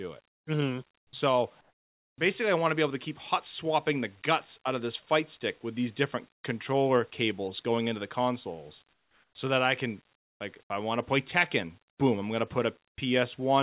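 Comfort noise in place of the background appears at 0.29, 0.98, 1.61, 6.32, 8.93, 10.16 and 12.89 s. Each gap lasts 0.09 to 0.57 s. The room tone turns flat and featureless, usually about 8 to 23 dB quieter. This is likely discontinuous transmission filling pauses with synthetic noise. At 1.08 s, the onset is clipped by the voice detector. About 50 ms of the sound's start is missing, so it begins abruptly. A late voice detector is the likely cause.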